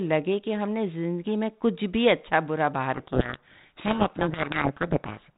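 A speech clip carried over G.726 telephone coding, band-limited below 4 kHz with only light codec grit. From 2.94 s to 5.32 s there's a codec payload misread: the bit order of the G.726 code words got swapped, so the speech drowns in harsh, rasping distortion for that stretch.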